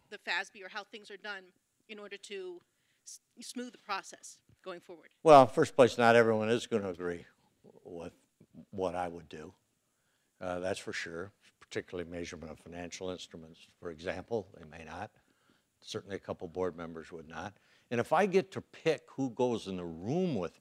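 Nothing in the audio stood out as a technical problem on listening.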